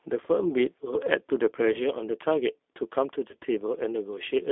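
Speech heard through the G.729 codec, which fits an 8 kbit/s G.729A stream. The line band runs from 300 Hz to 3.7 kHz, so a spectrogram shows a hard ceiling near 3.7 kHz with nothing above it. The voice is rebuilt from a filter, pitch predictor and sparse pulses, which makes it sound plainly rough and synthetic. There are two instances of VoIP packet loss concealed by the speech codec, at 1.72 to 1.80 s and at 3.31 to 3.36 s. Each gap fits a single lost 20 ms packet. The decoder stretches its last pitch and filter into a buzzy tone or coloured noise that fades. On a spectrogram this shows as smeared, repeated harmonics, and the waveform envelope sags and stays weak briefly after the packets resume.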